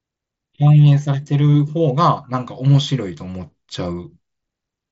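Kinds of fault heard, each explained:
Concealed Bluetooth headset packet loss: a voice packet from headset to phone went missing, and the receiver patched the gap with the best-matching stretch of recent waveform. At 2.74 s the gap lasts only 7.5 ms, pointing to one lost frame, so it is nearly hidden.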